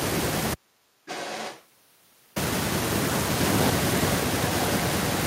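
At 0.54 s the speech drops to faint hiss roughly 50 dB down for 1.82 s, until 2.36 s. This is an audio dropout to a faint residue, likely from a lost signal feeding a live path. On a waveform it is a sudden near-flat band with a hard edge.

From 1.05 to 1.66 s, and again from 3.34 s to the end, an echo leak replays the speech 0.94 s late. It is about 10 dB down at first, then only about 5 dB down. This is likely from a far-end loudspeaker that the echo canceller failed to cancel. On a spectrogram it appears as a fainter, time-shifted duplicate of the speech patterns.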